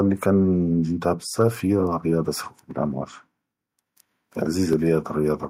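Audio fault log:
2.71–4.73 s, periodic USB or driver dropouts: a background task is stalling the USB bus or audio driver at a steady interval of 1.01 s, and around three times in this stretch roughly 10 ms of speech is skipped outright rather than filled with silence. Each skip splices the waveform together abruptly, so the speech carries evenly spaced ticks or small pops that are audible because signal is present at those moments.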